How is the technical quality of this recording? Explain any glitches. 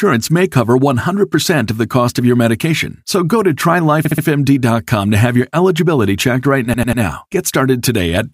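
The recording has two stutter glitches caused by repeated frames. At 4.05 s, after "go to", a 64 ms fragment plays three extra times through 4.24 s. At 6.74 s, after "your eligibility checked right", a 96 ms fragment repeats three more times until 7.02 s. In each case a short block of compressed data, consistent with two and then three frames, was decoded again, adding 192 ms and 288 ms.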